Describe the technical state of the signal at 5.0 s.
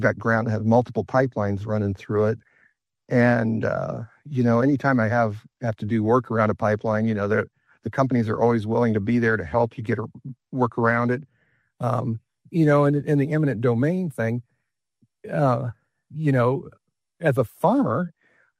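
At 5.0 s the signal is intact, with no dropout, distortion, glitch or other fault to be heard at that moment.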